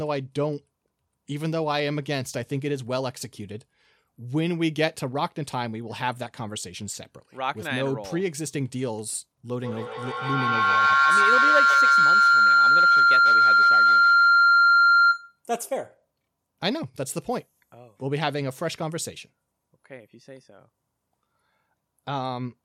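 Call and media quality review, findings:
Feedback howl, 9.57–15.43 s. Two endpoints sharing one room on the same call, with the mic-to-speaker loop gaining level each pass. The repeats grow rather than decay, narrowing to a tone around 1.5 kHz, with repeats roughly every 150 ms, the loop's round-trip delay. It peaks at about 9 dB above speech level and persists until the loop breaks.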